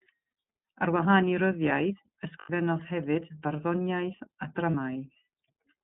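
iLBC codec coding runs through the whole of this speech recording: the line is held to roughly 150 Hz to 3.6 kHz, and the voice has a plainly rough, synthetic edge, which fits iLBC's 30 ms frame mode at 13.33 kbps, coding each frame's excitation independently. Lost iLBC frames break in at 0.29 to 0.32 s, 2.39 to 2.50 s and 4.71 to 4.74 s. The decoder fills each gap by repeating the last pitch cycle blended with noise, giving a brief buzzy, held vowel. The middle gap, spanning about 110 ms with three 30 ms frames (90 ms) lost, is the longest, and the voice returns almost immediately after each gap.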